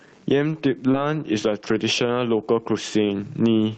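Gain pumping runs throughout the speech. A fast limiter, likely fighting input gain set far too high, clamps each loud sound, so the gain swings by roughly 15 dB.

At 0.91 s, 20 ms of audio missed the decoder, which extended the preceding sound for 23 ms. This short concealed packet loss is heard as a brief smear.

At 0.94 s and again at 2.40 s there is a lost packet rebuilt from error correction. Each time, a single missing packet was replaced by the low-bitrate Opus copy carried in the next one, so 20 ms turns rougher and noisier without any gap.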